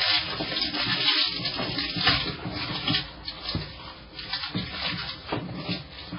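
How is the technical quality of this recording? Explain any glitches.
The quality is poor: heavy MP3 compression runs through the whole clip. The encoder was likely starved of bits, consistent with a bitrate near 16 kbps. It cut everything above about 5.3 kHz and dropped weak frequency content frame by frame, leaving the sound dull, watery and swirling, with smeared attacks.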